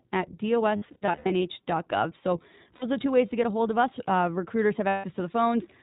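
A speech clip coded with the iLBC codec, at a setting that fits 15.2 kbps in 20 ms frames, has nothing above 4 kHz and sounds plainly rough and synthetic. Where lost iLBC frames occur, the decoder repeats the last pitch cycle mixed with noise, producing held, buzzy vowels. This happens in scattered runs of up to about 100 ms from 0.76 to 1.44 s, in a brief 60 ms gap at 2.77 to 2.84 s just before "are the two ways", and in a 160 ms stretch at 4.88 to 5.05 s. The voice recovers almost at once after each.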